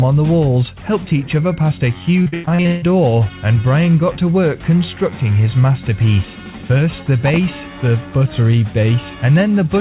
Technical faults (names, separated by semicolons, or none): repeated packet loss (robotic sound)